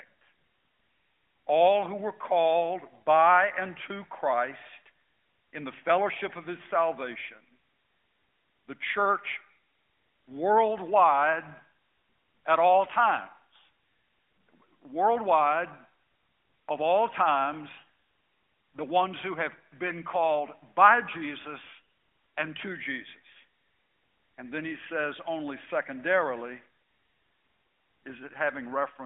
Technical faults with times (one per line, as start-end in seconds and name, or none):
none